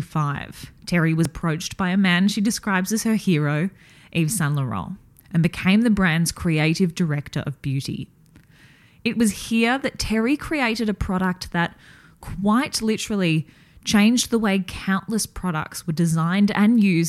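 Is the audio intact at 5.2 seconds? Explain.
No. At 5.2 s, just before "and became the brand's", there is a small jump ahead. The likely cause is a dropped buffer (overrun). About 20 ms was overwritten before being read, and the two sides were joined with no gap.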